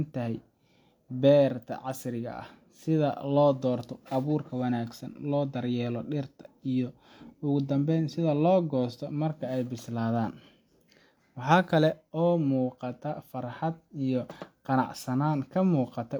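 No technical faults are audible anywhere in the speech.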